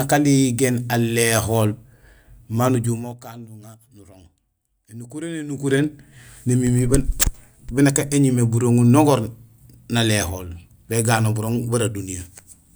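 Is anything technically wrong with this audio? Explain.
Yes, there's zipper noise on two level moves in this speech. From 2.82 to 3.2 s the level drops by about 20 dB, and from 5.46 to 5.8 s it comes back up by about the same. In both cases the gain jumps in unsmoothed 1 dB steps, around fifty a second, and each jump leaves a small click. You hear a fast ticking buzz riding on the speech while the level moves.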